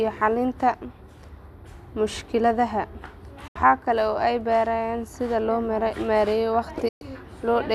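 At 3.47 to 3.56 s and again at 6.88 to 7.02 s, the speech mutes in a digital broadcast dropout. Corrupted frames cause the receiver to fade out over about 8 ms and go silent. Unlike a buffer stall, the audio resumes further on, with the missing speech lost.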